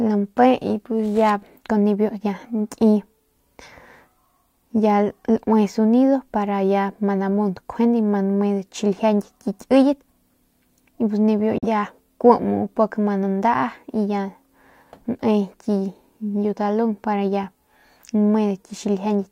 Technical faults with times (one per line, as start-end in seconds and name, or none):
11.58-11.66 digital broadcast dropout